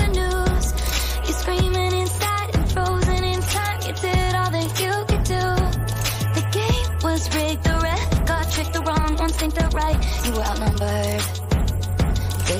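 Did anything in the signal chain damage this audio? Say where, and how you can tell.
Yes, there's a time-stretched section from about 8.40 to 10.90 s. The pace suddenly jumps to roughly 1.5 times speed while the pitch stays put, and it sounds rushed, likely from a time-stretch pass in playback or editing software dropping short chunks to shorten that stretch.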